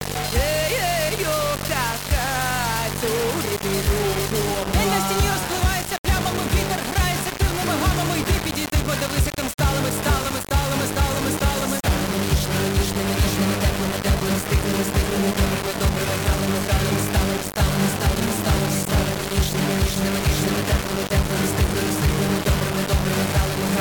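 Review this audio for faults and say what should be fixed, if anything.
Heavy grainy distortion runs throughout and shifts with the sound. Quiet passages sputter or drop out. Likely low bit depth without dither, fitting about 3-bit rounding. Keep the bit depth high through processing, and add dither whenever reducing it.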